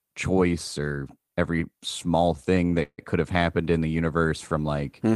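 Speech clip with two timing faults. At 2.66 to 2.71 s, a short stall from a late packet holds the sound an extra 23 ms with a slight buzz or dip, then resumes without losing anything. From 2.83 to 3.00 s comes a longer call audio freeze: the last sound is stretched into a fading buzz or hiss that drops to about 60 ms of silence before the speech picks up where it stopped, likely because the jitter buffer ran empty while packets were held up. This 152 ms gap is what sets it apart from the brief stall.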